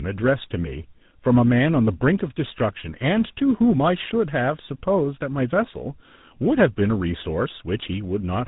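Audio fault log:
Throughout: tandem speech coding. The speech sounds rough, muffled and warbly, with nothing above about 3.8 kHz. It passed through two speech codecs in a row, ending in GSM full rate, so each coder reworked the previous one's already damaged output and compounded the loss.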